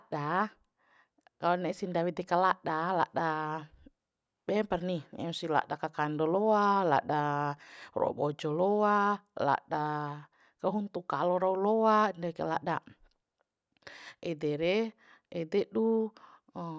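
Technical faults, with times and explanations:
No technical faults can be heard anywhere in this speech recording. Nothing in the audio calls for a timed entry.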